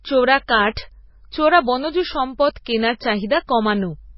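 From the start the speech sounds watery and swirly, with smeared consonants and no treble at all above 5.5 kHz, most likely from heavy MP3 compression at a bitrate near 18 kbps. A spectrogram shows a hard ceiling at 5.5 kHz and speckled, flickering patches below it.

At 0.75 s a short hiss of pre-echo leads into an attack, which sounds soft and blurred. The codec spread its coding noise across the whole block, so it fills the quiet 15 ms before the onset, visible as a smear just ahead of the waveform's jump.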